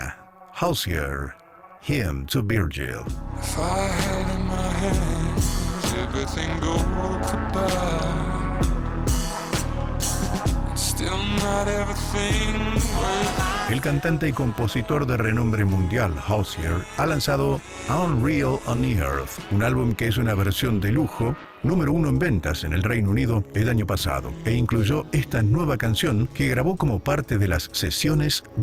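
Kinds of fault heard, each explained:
overlap-add ripple: The audio was split into windowed frames and rejoined with an overlap whose window gains do not add up to a constant, so the level dips and swells once per frame throughout. Here the swing is about 11 dB at around 200 Hz, fast enough to blur into a metallic buzz with extra tones around each note rather than a countable flutter. Unlike amplitude modulation from a gain stage or compressor, the ripple is locked to a fixed frame rate and stays steady regardless of the material.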